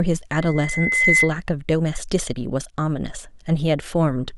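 From 0.32 to 1.32 s a loudspeaker feedback squeal appears. The microphone picks up its own loudspeaker, and at 2 kHz the loop gain exceeds one. The tone builds by itself over about 0.7 s to a few dB above the speech, whereas a steady interfering tone would not swell.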